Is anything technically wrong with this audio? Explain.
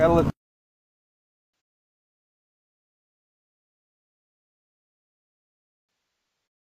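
Yes, there's AAC frame loss with concealment. A short smeared patch sits at 1.52–1.6 s, then scattered dropouts run from 5.87 to 6.46 s, the longest around 150 ms. Each time the decoder patches the gap by reusing the last good spectrum, so the sound turns noisy and phasey.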